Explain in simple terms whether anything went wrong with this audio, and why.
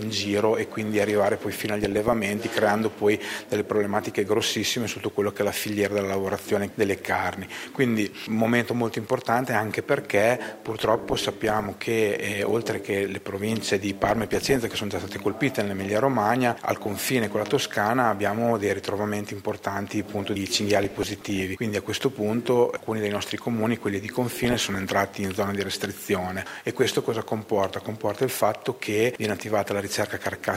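Weak digital radio reception let a small share of damaged data slip past error correction, so slices of the sound were corrupted. This DAB burbling gives short blips of noise at 1.84–2.13, 10.67–11.67, 14.03–14.77, 20.84–21.43 and 24.12–25.08 seconds.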